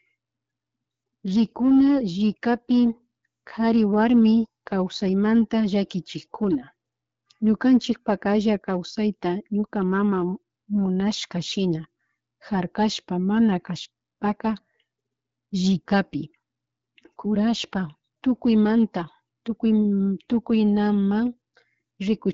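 No faults are audible in this speech recording, which is carried over the AMR wideband (HD Voice) codec at 12.65 kbit/s with its band topping out near 7.7 kHz, as that path gives.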